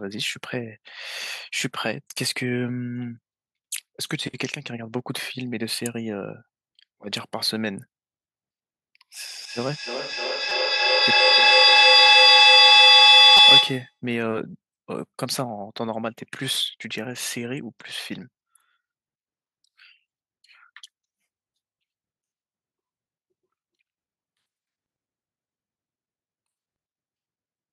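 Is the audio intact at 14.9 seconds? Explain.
No, a repeated buffer at 14.86 s plays a roughly 5 ms piece twice after late data, giving a click seen as a duplicated waveform stretch with a hard step and thin vertical spectrogram line.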